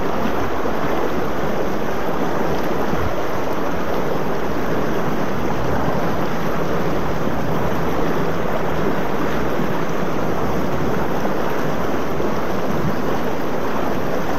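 The audio carries a DC offset from start to finish, a constant shift of about -18 dBFS that moves the whole waveform off the zero line. It adds nothing audible, unlike low-frequency rumble or mains hum, which can be heard as a moving or pitched tone. Here the energy sits as a steady component at 0 Hz, and it eats into headroom on the side the waveform is pushed towards.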